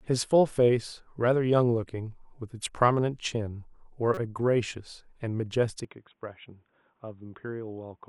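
At 4.14 to 4.18 s, a corrupt frame decoded: damaged bits in a couple of compressed frames were played anyway, putting energy at wrong frequencies. It sounds like a brief burst peaking at about -20 dBFS, frame-long rather than a sharp click.

From 5.85 s to the end, the sound abruptly turns duller, with nothing above 3.8 kHz and the level about 5 dB lower, likely because the input switched to a poorer device. There is no silence at the change. A faint new noise floor sits about 50 dB below the signal, and the tone changes along with the bandwidth, which sets it apart from a simple codec bandwidth drop.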